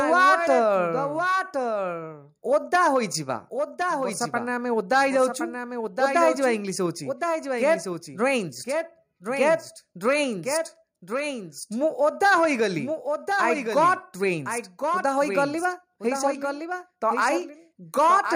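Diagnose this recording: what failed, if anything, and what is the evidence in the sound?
Every event in the sound returns a second time about a second later, a few decibels quieter than the first, and this runs through the whole recording. The repeat is full-band and dry, with none of the decay or room colour a real echo would carry, so it is a doubled audio track rather than acoustic reflection. The likely cause is the same signal captured twice, once through a slower path, at the driver or buffer stage, with both copies mixed together.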